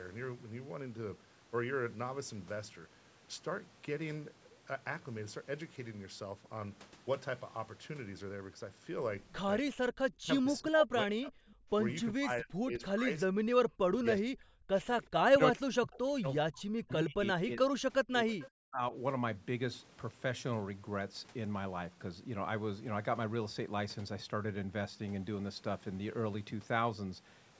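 With both sides likely talking at once, the echo canceller cannot tell this talker from the far-end echo and turns the speech down. This is speech suppressed in double talk, at 10.15–11.4, 12.11–13.1, 13.26–13.35, 13.77–14.72, 15.26–17.9 and 18.08–18.94 s. The voice drops by roughly 40 dB, about 30 dB in the second stretch.

Between 18.4 and 18.5 s, inside the last suppressed stretch, the loudspeaker side's echo canceller likely lets some of its microphone pickup through. This echo leak returns a brief scrap of voice, delayed by about 372 ms and sitting about 20 dB below the speech.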